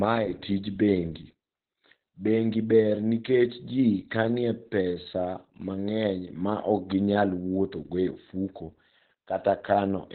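Across the whole clip, Opus voice compression at heavy damage muffles the speech: nothing survives above about 4.2 kHz, which fits SILK narrowband coding near 8 kbps. Unlike a simple low-pass filter, the coarse excitation also leaves the speech hoarse and faintly robotic.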